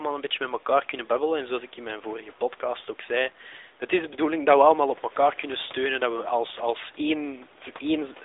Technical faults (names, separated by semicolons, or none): AMR narrowband mobile codec